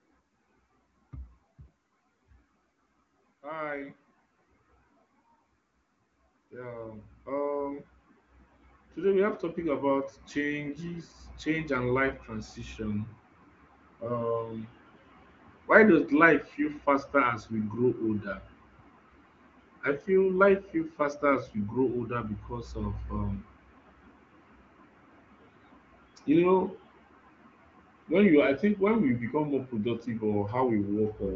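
From 6.5 to 16.87 s, automatic gain rising lifts the level by about 11 dB; speech and background noise swell together, unlike a speaker moving closer.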